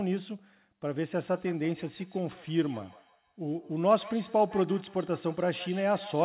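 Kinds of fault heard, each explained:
Feedback echo between two devices: a second device replays the call into a microphone whose echo canceller cannot remove it. From 1.31 s on, sound returns roughly every 150 ms, peaking about 17 dB below the speech. Unlike reverberation, the repeats are distinct and evenly spaced.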